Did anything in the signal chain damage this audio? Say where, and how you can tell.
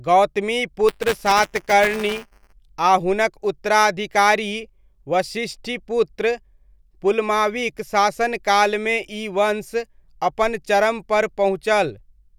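Yes. At the driver or buffer stage, the writer and reader of the ring buffer have slipped and cross inside each period, causing buffer tearing from 0.88 to 2.53 s. A small slice of every buffer replays audio from roughly 10 ms earlier, with hard joins on both sides. Those joins repeat 200 times a second, which fits a 5 ms buffer, so the speech carries a steady robotic buzz at 200 Hz while sound is present.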